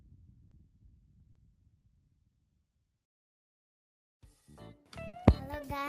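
At 0.47 to 0.53 s and again at 1.31 to 1.37 s there is short concealed packet loss. In each case about 40 ms of audio failed to arrive in time, and the receiver filled the hole by extending the preceding sound before crossfading back into the real signal. Each one comes across as a brief smear or wobble, with a tiny piece of the original sound absent.

Near the end, from 5.07 to 5.15 s, a burst of packet loss removes a longer stretch of about 60 ms. The concealment carries the last received sound forward and lowers its level as the gap continues, so it is heard as a held buzz or fading hiss. Playback then picks up further along, and the audio that belonged in the gap is simply gone.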